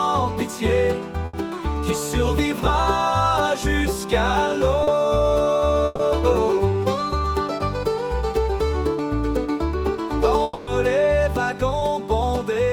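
At 1.25 to 1.35 s a burst of packet loss cuts out about 80 ms of audio that never reached the receiver in time. The decoder carries the last sound forward and turns it down across the hole, so the gap is heard as a brief held buzz or fading hiss, and the audio resumes a little further on with that stretch gone.

Near 4.83 to 4.89 s a short concealed packet loss drops about 40 ms. The receiver patches it by extending the preceding sound, pitched or noise-shaped as appropriate, and blends back into the real signal, leaving a quick smear or wobble where a brief sound may disappear. The same happens again at 11.79 to 11.83 s, where only about 20 ms is missing and the result is an even smaller wobble.

A second burst of packet loss at 5.85 to 6.01 s is longer, about 140 ms. The synthetic continuation stretches far enough to be heard as a decaying buzz or hiss, with no drop to silence, before the sound jumps ahead past the lost section.

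From 10.43 to 10.69 s the audio breaks off for about 240 ms, most likely a long network dropout. The concealment keeps a fading imitation of the last sound going for the whole gap without reaching silence, and the signal then returns further along, missing everything in between.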